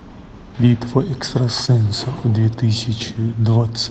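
A speech clip carrying one short concealed packet loss, from 1.65 to 1.69 s. About 20 ms of audio never reached the decoder in time, which fits a single lost packet. The receiver filled roughly 17 ms of the gap by extending the preceding sound, using its pitch where it was voiced and shaped noise where it was not, then cross-faded back into the real signal. The result is a brief smear or wobble, and a short consonant there may be lost. The Opus call path caps the audio band at 8 kHz throughout.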